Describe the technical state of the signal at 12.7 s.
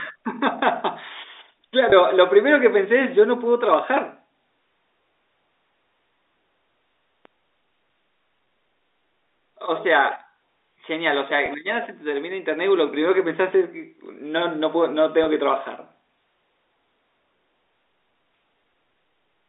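At 12.7 s the speech is intact, with no fault, just the narrow telephone band of its G.711 coding.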